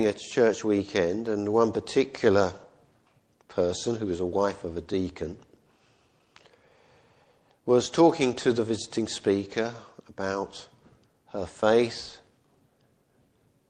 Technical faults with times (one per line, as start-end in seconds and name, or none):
0.00-13.69 clock drift between sender and receiver
0.05-13.33 repeated timing corrections